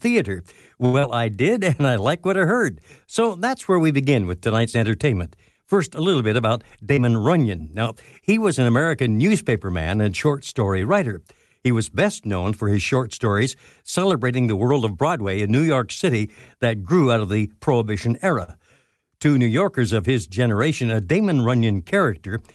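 At 0.85 s the speech hangs for a moment, one sound held too long with a slight buzz or dip, then carries on with nothing lost. This is a short stall from a late packet: the jitter buffer ran dry and the receiver stretched the last sound by 80 ms until the packet arrived.

Right after, from 0.99 to 1.06 s, there is a brief smear. This is short concealed packet loss. About 60 ms of audio never reached the decoder in time, so the receiver extended the preceding sound for 36 ms, blended back into real audio and let the delay drop slightly.

Between 1.49 and 1.86 s the speech drags, slower but at the same pitch, with drawn-out sounds. This is a jitter buffer slow-down: the receiver repeated small pitch-period pieces to rebuild its reserve, adding 37 ms and running at 92% speed.

At 6.95 to 7.00 s another brief smear marks a second concealed packet loss. About 60 ms went missing and only 23 ms was filled in, so the delay shrank a little.

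From 14.94 to 15.49 s the speech sounds hurried but keeps its pitch. This is a jitter buffer speed-up: with more audio queued than it aimed for, the receiver cut out short pitch-period pieces, removing roughly 70 ms and playing at 111% speed.

At 18.43 s a sound is held a little too long again, a second short stall from a late packet, with 46 ms stretched and nothing lost. The Opus call path's coding leaves the top end rolled off, which fits a cut-off around 12 kHz.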